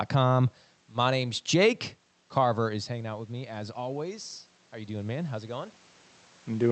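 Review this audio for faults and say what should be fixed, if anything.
Automatic gain rising runs from 2.42 s to 5.8 s. Around 2.5 s the talker moves away and the level at the microphone falls by about 15 dB. The gain control treats this as a quiet input and slowly raises its gain, about 7 dB over more than three seconds. The voice and the room noise swell together, so the background becomes audibly louder behind the speech. High-frequency content stops near 8 kHz, as expected from the call codec. To prevent this, use a slower, bounded gain control with a noise gate or voice-activity gating so it does not push up room noise during level drops.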